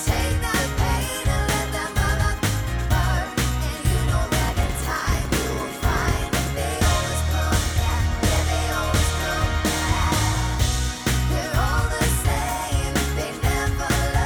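From 4.40 s to 6.51 s there is a block size mismatch, padded. One stage hands over blocks shorter than the next stage expects to read. The missing part of each block is filled with silence. That leaves a brief gap in every block. The gaps repeat at 46.9 Hz, heard as a steady buzz. This fits a 1024-sample read. The sound also runs slow, at 0.938 times normal speed. Its timbre stays about the same.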